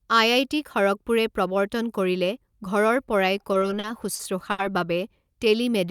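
It's a speech recording with two playback problems near the end. From 3.43 to 4.60 s there are repeated stalls (stutter): seven times the jitter buffer ran dry because packets came in late, and the receiver stretched the last sound to cover the wait, about 190 ms in total, with the longest gap around 70 ms. Nothing gets lost, but about a sixth of that stretch is concealment, so it drags and hiccups. Then from 5.47 to 5.89 s there's a jitter buffer slow-down: the receiver rebuilt its reserve by repeating single pitch periods, adding about 42 ms, so the speech plays at roughly 91% speed with the pitch unchanged and the sounds come out drawn out.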